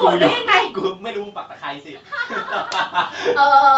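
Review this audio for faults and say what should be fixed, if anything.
Nothing here needs fixing. The speech stops at about 8 kHz, as expected from the call's Opus path, and the level dips and rises as the talker shifts position early on and again later, alongside some ordinary room noise.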